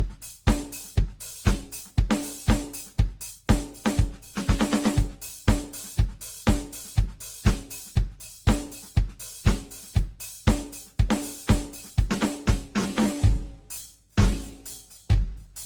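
Music, and throughout it has a swirling, hollow, smeared quality that is worse than a single encode at around 48 kbit/s would give, with transients that blur instead of snapping. That points to generation loss, likely from the audio being passed through an Opus encoder around ten times. Each pass requantises on a shifted frame grid, so the errors and spectral gaps build up. Content still reaches about 20.2 kHz. From 12.66 s to the end the pace drops abruptly to about 0.54 times speed while the pitch stays put, and the music drags. This is a time-stretched section, likely done by software that repeats short slices to fill the extra length. A tape slowdown or sample-rate mismatch would lower the pitch as well, which is how the two can be told apart.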